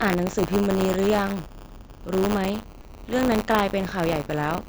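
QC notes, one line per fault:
Throughout, buffer tearing: the writing side and the hardware reading the ring buffer have drifted and cross inside every 10 ms period, so a small slice of each buffer, roughly a twentieth, replays audio from about 40 ms back. The hard joins give a steady 100 Hz rattle that rides only on the speech and vanishes in silences, unlike a hum.
0.87 s and 2.82 to 2.84 s, concealed Bluetooth headset packet loss: short headset packet dropouts of 7.5 ms and 22.5 ms, consistent with one and then three lost frames, were filled by repeating the closest-matching recent stretch of waveform. The first is nearly hidden; the second holds a brief buzzy tone at full level with a slight warble as real speech resumes, a one-off rather than a continuous buzz. The mSBC headset link carrying it shows its usual 8 kHz ceiling and light graininess.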